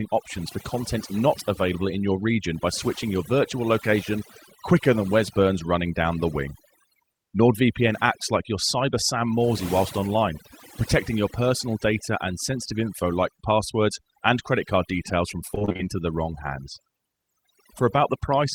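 A speech recording with two problems. The first is overdone noise removal, and it runs the whole length. The background falls away, with twinkling specks where stray frequency bands pop in and out. The suppression sits too close to the voice. Quiet parts of each sound are cut along with the noise.

The second problem is repeated packet loss, heard as robotic sound from 15.47 to 15.81 s. It begins right after "credit card details from" and clears before "the wrong hands". In that third of a second, short holes follow one another in quick succession. The longest is about 24 ms. Each hole is patched by stretching the sound just before it. Close to half the stretch is filled this way. The result is choppy, with fragments missing.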